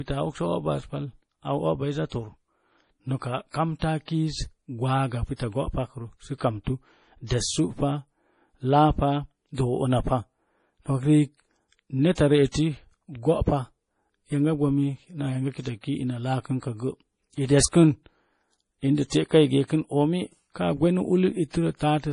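Throughout the speech, the treble stops dead at 10.5 kHz and the sound turns watery, with swirling sibilants and smeared consonant onsets. A spectrogram shows a flat ceiling and patchy, flickering blocks beneath it. The likely cause is heavy MP3 compression, consistent with roughly 32 kbps.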